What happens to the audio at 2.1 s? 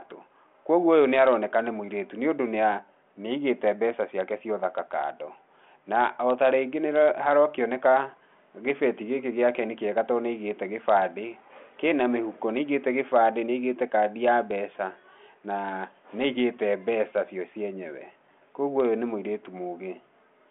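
Nothing goes wrong at 2.1 s: the speech carries straight through that moment without any dropout, glitch or other disturbance, heard through the narrow telephone band of the G.726 ADPCM link.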